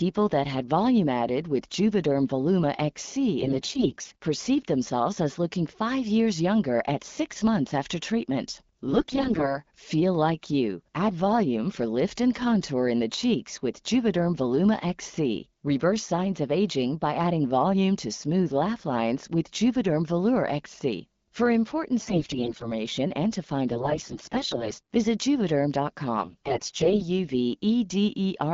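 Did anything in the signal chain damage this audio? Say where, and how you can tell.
Yes. AMR bit errors over the network link make the speech turn hoarse and gargly at 3.4, 8.9, 22.0, 23.7 and 26.2 s, as flipped low-priority bits misplace excitation pulses.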